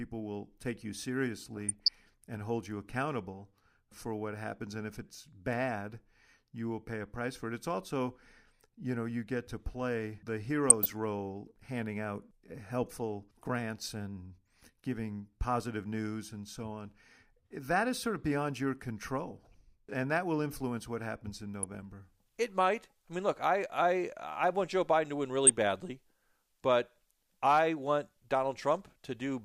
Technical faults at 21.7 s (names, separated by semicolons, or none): DAB burbling